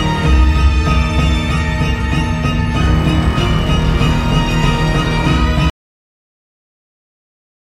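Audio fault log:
5.70–7.67 s, cut-off end: the sound stops abruptly in mid-event at 5.70 s and stays in digital silence to the end, because the final buffers never reached the output. Unlike a fade-out there is no decay, and unlike a dropout the sound never returns.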